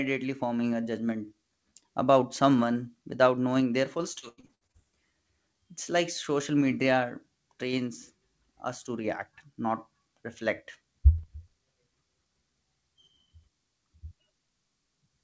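Speech that turns choppy and robotic from 4.13 to 4.96 s, with pieces missing. This is repeated packet loss: short gaps up to 89 ms were patched by stretching the last sound, covering about 40% of that span. The audio is band-limited at 8 kHz throughout, which fits a wideband call codec such as G.722.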